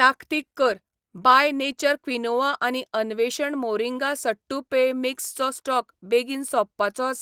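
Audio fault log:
Nothing to log here; the Opus voice compression on this speech sounds like a hybrid-mode stream at around 24 kbps that keeps the full band up to about 20.3 kHz, and it's just doing its normal job.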